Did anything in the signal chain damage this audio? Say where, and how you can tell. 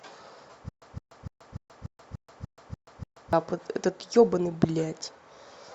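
Yes. From 0.69 to 3.33 s the speech falls into a stutter with silent gaps. A burst of about 163 ms repeats nine times at a steady 293 ms period, with roughly 130 ms of digital silence between repeats. The cause is likely a playback or stream buffer stall, where each retry replays the last fragment and then runs dry. Plain dropouts would leave holes without repeated material, and packet-loss concealment would fill the gaps rather than leave true silence.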